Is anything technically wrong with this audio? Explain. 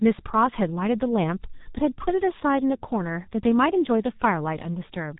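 Yes. Throughout the speech there is heavy G.723.1 codec damage. This low-rate telephony coder works in 30 ms frames and rebuilds the voice from a sparse, slowly updated model, so little detail survives. Consonants smear, vowels turn hoarse, and the whole clip sounds muffled, which fits a bitrate near 6 kbit/s. On a spectrogram the energy stops dead at 3.8 kHz, with a blank band above and blurred, blocky harmonics below.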